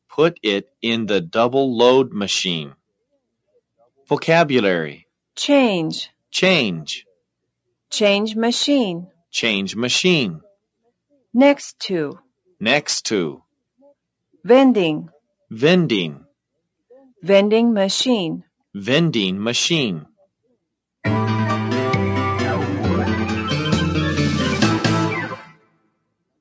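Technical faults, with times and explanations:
25.45 to 25.9 s, sound cut by the noise suppressor: the sound drops by up to about 19 dB for roughly half a second near the end. The suppressor mistook it for background noise. It turned it down harder than everything else, so it fades abruptly.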